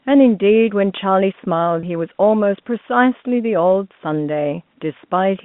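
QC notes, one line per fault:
1.80–1.83 s, packet loss with pitch repetition: a brief, slightly held, buzzy sustain in the speech lasting 30 ms. The receiver bridged the gap by repeating the last pitch period, which fits a single lost packet on this telephone-band line.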